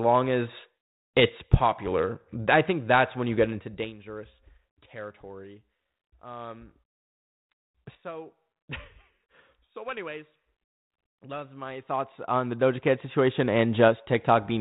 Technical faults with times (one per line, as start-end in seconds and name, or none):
none